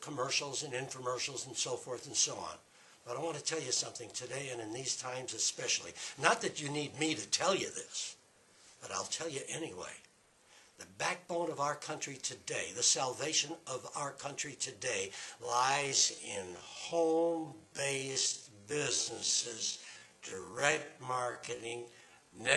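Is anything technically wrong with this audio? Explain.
Yes. From 15.41 s to 22.57 s there is a time-stretched section. The pace abruptly drops to 0.515 times normal speed, yet pitch holds steady. It likely comes from software lengthening the audio by repeating short slices. It sounds dragging.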